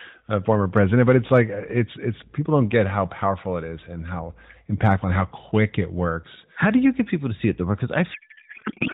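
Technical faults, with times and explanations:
8.14 to 8.93 s, codec payload misread: in the last 0.8 s or so the speech turns into garbled noise and warble that barely tracks it. The AMR frames were packed octet-aligned but the decoder unpacks them as bandwidth-efficient, so every field lands a few bits off and the decoder builds nonsense from valid-looking frames. It runs to the end of the clip, after the light narrowband AMR-NB coding heard up to that point.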